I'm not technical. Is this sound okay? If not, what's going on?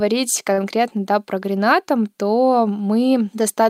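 No. From 0.53 to 0.60 s, just before "да про", there is a short stall from a late packet: a piece of the audio arrived late, so the player held the last sound for about 41 ms, then carried on. Nothing is lost, but the rest runs 41 ms later.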